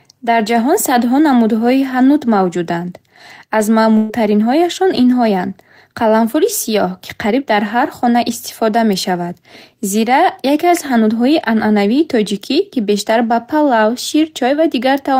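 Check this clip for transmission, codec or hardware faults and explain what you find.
One fault is present. From 3.97 to 4.12 s, a burst of packet loss: the sound is held and fades for about 120 ms, then jumps ahead, because the receiver concealed lost packets by extending the last audio.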